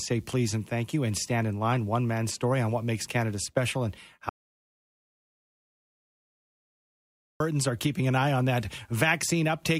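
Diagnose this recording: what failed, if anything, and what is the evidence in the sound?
Audio dropout to silence from 4.29 s to 7.40 s: the speech cuts off abruptly and about 3.1 s of audio is missing, with no room tone. This was likely a lost input link while the recorder kept writing zeros. The waveform shows a dead-flat line, and the spectrogram shows a fully black band.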